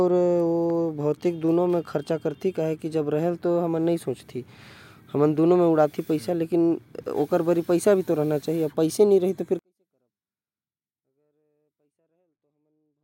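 From 9.59 s to the end, the speech suddenly falls about 48 dB but stays clean. That's a 24-bit alignment error (too quiet): 24-bit samples sitting in the low bytes of 32-bit words got read as full 32-bit values, so everything's nearly inaudible.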